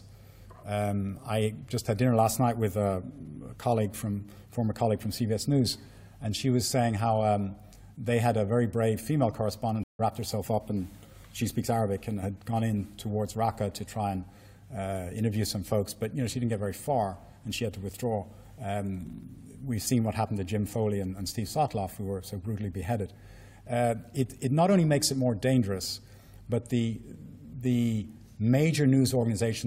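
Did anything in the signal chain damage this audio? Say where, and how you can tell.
Yes. There's a stream reconnect at the network stage, from 9.83 to 10.01 s. The sound drops out for about 156 ms, and when it comes back it has jumped forward by something like 150 ms, so a chunk of material is simply gone rather than delayed. That's the player losing its connection, rejoining the live stream further along, and spinning up a fresh decoder, which is why the restart lands cold instead of picking up where it left off.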